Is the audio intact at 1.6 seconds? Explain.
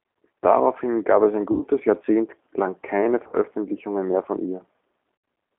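No. Just after "gab es ein", from 1.52 to 1.63 s, VoIP packet loss concealed by the speech codec stretches the last sound into a buzzy tone or coloured noise that fades. A spectrogram shows the last sound smeared and repeated, and the waveform shows a decaying envelope. Throughout, the G.729 codec adds a rough, synthetic edge and confines the band to 250 Hz to 3.5 kHz, so the spectrogram is empty above 3.5 kHz.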